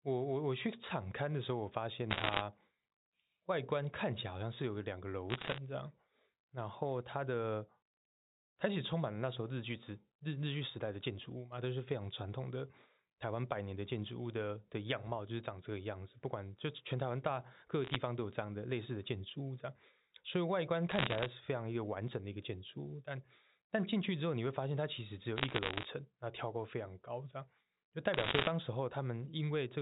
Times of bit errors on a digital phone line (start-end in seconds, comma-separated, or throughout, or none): 2.11-2.42, 5.30-5.58, 17.84-17.96, 20.90-21.26, 25.37-25.86, 28.14-28.48